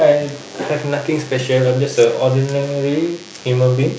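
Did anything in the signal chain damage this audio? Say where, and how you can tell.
Yes. A DECT cordless phone buzz sits under the speech for the whole clip, a thin, steady buzz at 100 Hz with a dense ladder of harmonics, roughly 25 dB below the speech. The damage happens in the analogue stage, at the wiring or input circuitry. A nearby DECT handset or base transmits a short radio burst every 10 ms, and a junction in the audio path rectifies it, turning the pulse train into audible 100 Hz buzz.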